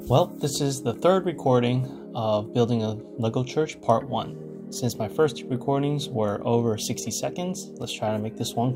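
No technical faults can be heard anywhere in the audio.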